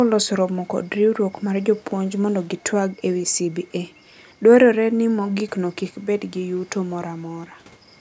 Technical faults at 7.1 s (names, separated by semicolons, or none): none